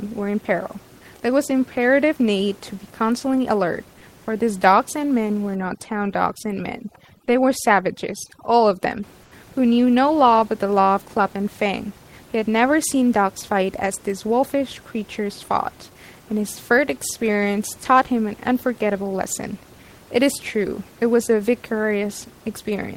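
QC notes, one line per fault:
5.55 to 9.03 s, overdone noise removal: the room background drops and breaks up into twinkling specks, as over-aggressive denoising strips away faint parts of the voice.
9.23 to 9.31 s, comfort noise in place of the background: for 80 ms the room noise becomes a smooth, featureless hiss about 3 dB quieter, likely synthetic fill from discontinuous transmission during a pause.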